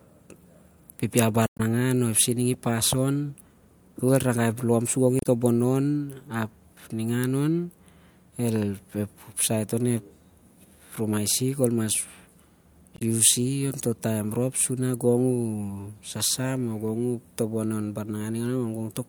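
A speech clip with damaged data in a compressed stream at three points. At 1.45 to 1.61 s a short glitch breaks in, and the timing gains about 32 ms. At 5.19 to 5.26 s, between "lom sur gong" and "tobonon ap ningan on", a brief glitch cuts through. At 12.96 to 13.02 s another glitch appears. Each time, corrupted bytes make the decoder misread frames, lose sync and hunt for the next valid header.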